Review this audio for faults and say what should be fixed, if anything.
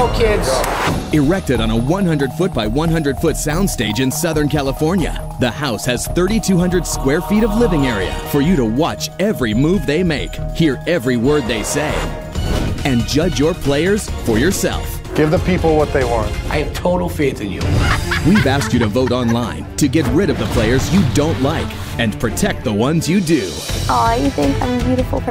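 No faults were heard that call for any fix.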